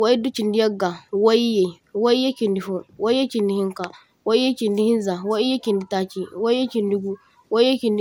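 From start to finish the speech carries a swirling, hollow texture, with consonant onsets smeared and a watery shimmer beneath the voice. There is no content above about 17.9 kHz. This is generation loss, likely from the audio passing through a lossy codec around five times, in a way that fits repeated MP2 coding at 128 kbit/s. Each pass requantised on a shifted frame grid, so noise accumulated beyond what one encode at that rate would leave.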